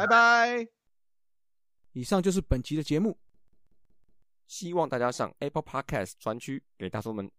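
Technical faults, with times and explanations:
3.34–4.27 s, system hang loop: the computer or its audio driver stalled while the sound hardware kept replaying the same stretch of its ring buffer. A slice of speech about 186 ms long, which fits an 8192-sample buffer, repeats five times in a row at roughly 5.4 per second. At that length each repeat is heard as a separate chunk, giving a rapid machine-gun stutter. Little or no audio seems to go missing around the stall.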